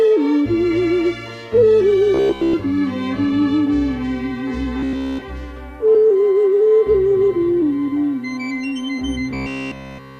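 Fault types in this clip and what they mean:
Robotic sound from repeated short buffers: at 2.14 to 2.55 s, 4.80 to 5.22 s and 9.31 s to the end, the audio turns into a rigid metallic buzz fixed at 66.8 Hz. This is likely new audio arriving too seldom, so playback loops a roughly 15 ms fragment to fill the gaps while the real material is skipped. Most of the first stretch is looped, and all of the later two.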